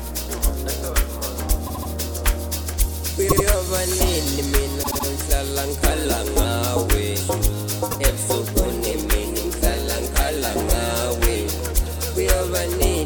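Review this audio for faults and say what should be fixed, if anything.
Repeated frames cause a stutter at 1.66 to 1.90 s, 3.28 to 3.44 s, 4.82 to 5.06 s and 7.90 to 7.98 s. Each time, the same 78.4 ms block of compressed audio plays again, which fits a run of three frames of about 26 ms each. The extra plays are three, two, three and one, adding 0.24, 0.16, 0.24 and 0.08 s to the running time. To prevent it, fix the writer or transport so that each frame is sent once, using sequence numbers or deduplication before the stream is muxed or decoded.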